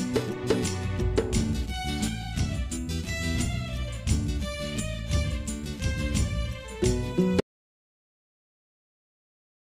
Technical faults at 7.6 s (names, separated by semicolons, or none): audio dropout to silence